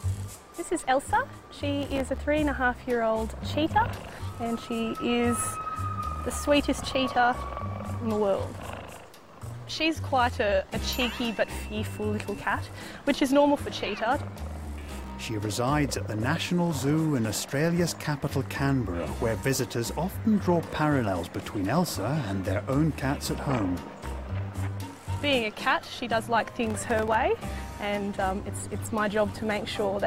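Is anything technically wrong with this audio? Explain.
Yes. Processor overload crackle occurs in three bursts: 1.81 to 2.18 s, 14.76 to 15.12 s, and 26.67 to 27.15 s. The processor fell behind and missed its buffer deadlines again and again. Each miss left a brief gap of silence with hard edges. The gaps are very short, around a millisecond and a half, which points to a small buffer. Tens of them crowd into each burst. The result is a gritty crackle over the sound that stops when the load eases.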